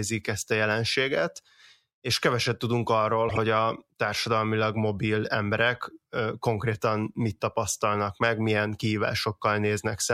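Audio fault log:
3.29–3.38 s corrupt frame decoded: between "és keveset tudunk arról" and "a társadalmilag mobil emberek", flipped bits misplace energy across a few frames, producing a chirp, squeak or burst of noise peaking around -15 dBFS, seen as a bright block on the spectrogram.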